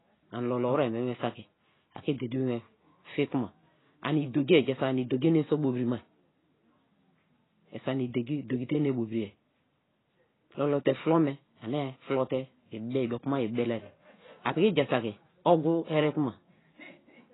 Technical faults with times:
0.00-17.34 AAC compression

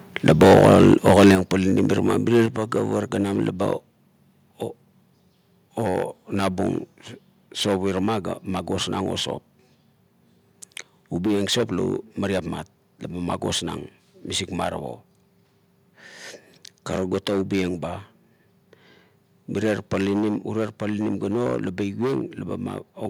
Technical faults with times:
0.28-1.35 microphone overload
0.30 microphone volume stepped down
1.35 microphone volume stepped down
2.46 microphone volume stepped down

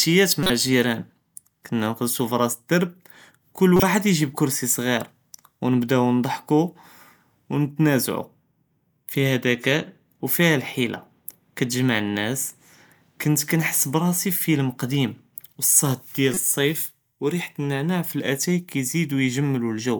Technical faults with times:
0.43-0.50 corrupt frame decoded
3.76-3.83 corrupt frame decoded
16.33-16.41 corrupt frame decoded

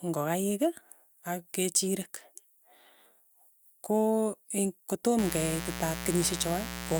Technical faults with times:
5.18-7.00 mains buzz

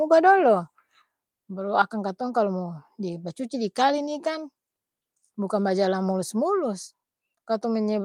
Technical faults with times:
1.02 microphone volume stepped down

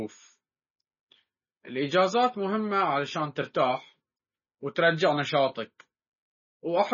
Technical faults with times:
0.00-6.93 MP3 compression

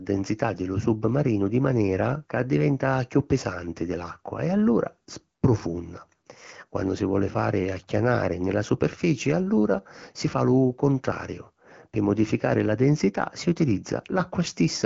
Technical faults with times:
none

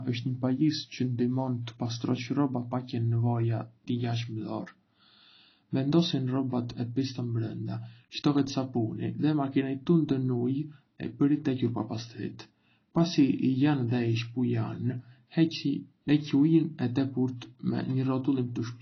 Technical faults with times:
0.00-18.82 AAC compression

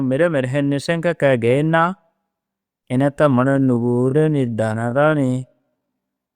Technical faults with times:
3.36-6.35 time-stretched section

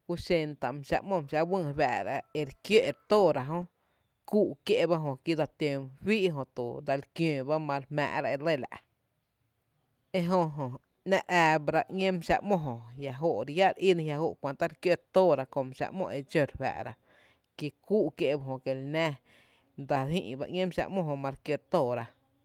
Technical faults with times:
none

